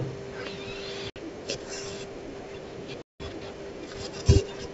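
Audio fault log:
1.10–1.17 s and 3.02–3.23 s, packet loss on an ADPCM call: hard-edged silent gaps, about 60 ms and then 180 ms. Each time the sound comes back slightly distorted for a moment, because the decoder's predictor and step size lost track of the sender's.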